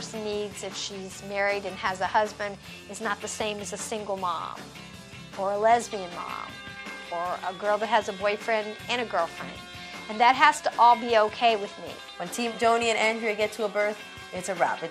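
No technical faults can be heard anywhere in the clip. There are no breaks, dropouts or glitches to point to at any moment.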